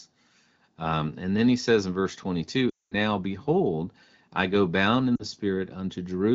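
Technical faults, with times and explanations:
2.70–2.95 s, lost AMR speech frames: after "he says in verse", about 220 ms of speech smears and fades to silence as the decoder repeats the last good frame with falling gain. The spectrogram shows frozen, blurred harmonics fading into a blank gap, and the waveform envelope tapers to flat before "now behold I go" returns weakly.
5.15–5.24 s, lost AMR speech frames: just after "I go bound in", a 40 ms dip, which fits two concealed 20 ms frames. This appears as a brief smeared notch in the spectrogram and a dent in the waveform.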